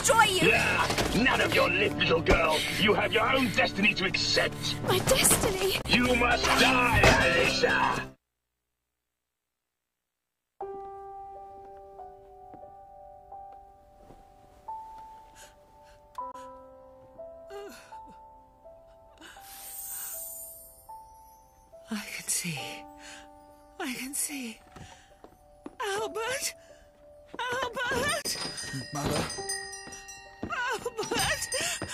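At 5.82, 16.31 and 28.22 s the sound cuts to silence for about 0.04 s, a brief gap that fits one lost frame of roughly 21 ms. This is likely a Bluetooth dropout: the audio resumes as if it had kept playing, rather than pausing and picking up where it stopped.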